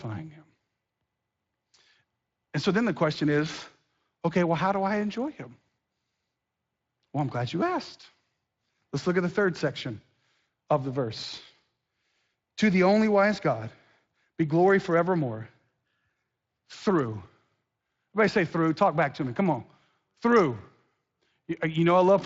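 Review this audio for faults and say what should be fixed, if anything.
No faults; nothing needs fixing.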